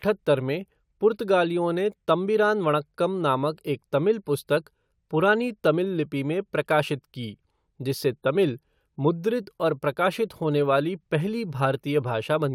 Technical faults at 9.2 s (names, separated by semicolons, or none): none